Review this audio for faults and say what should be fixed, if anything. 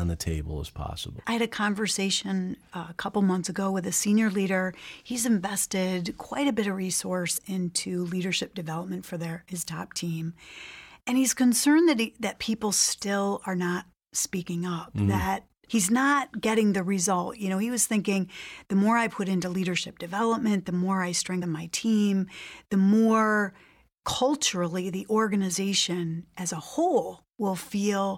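Compressed frames are skipped twice in the speech, at 7.36 to 7.39 s and at 21.41 s. The audio jumps ahead about 50 ms, then about 70 ms. That fits two and three missing 23.2 ms frames. Check file integrity after encoding and transfer.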